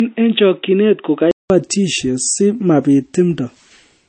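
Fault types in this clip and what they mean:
low-bitrate audio saved at a high bitrate: Across the whole clip the speech lacks its top end, with nothing above 8.3 kHz, so it sounds dull and closed-in despite the file's size. The likely cause is an earlier low-rate MP3 encoding, which fits 32 kbit/s, later re-saved as a 320 kbit/s MP3. The second pass kept the band limit the first encoding imposed and could not bring back the detail it removed.
input switched to a poorer device: From the start to 1.5 s the speech is narrow and boxy, with nothing above 3.8 kHz and a faint new noise floor far below the speech, while loudness stays about the same. At the change there is a 0.19 s silence, after which the fuller sound returns. This is likely the recording switching between inputs, with this opening stretch captured by a lower-quality microphone or a headset's call profile.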